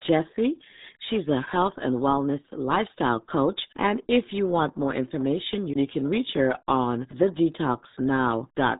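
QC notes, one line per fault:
throughout, RealAudio 14.4 codec: nothing above 3.8 kHz gets through, so the speech is muffled, and heavy coding damage gives it a gargly texture. This fits RealAudio 1 at around 8 kbit/s, a speech codec built for dial-up modems.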